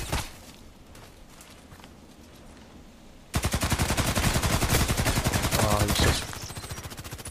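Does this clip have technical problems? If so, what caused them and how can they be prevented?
Yes. At 3.83 s there is a block of digital silence lasting about 0.73 ms, which fits a 32-sample block. The sound cuts out and returns with no fade. With a gap this short, both edges merge into a single tick. Prevent it by giving the audio callback enough processing headroom or a larger buffer, and by guarding calculations against invalid values.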